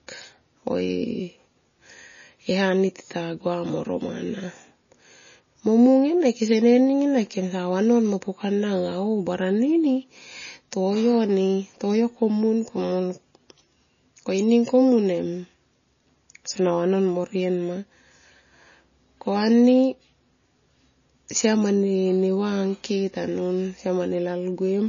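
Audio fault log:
Throughout, MP3 compression: the speech has nothing above 7.1 kHz and a plainly audible watery, swirling texture, likely from a starved encoder, around 24 kbps, cutting the treble and zeroing weak frequency lines that flicker between frames, smearing consonants and sibilants.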